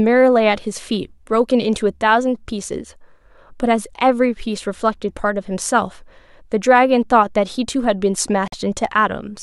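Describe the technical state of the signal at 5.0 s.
At 5.0 s the speech signal is intact, with no audible fault at that moment.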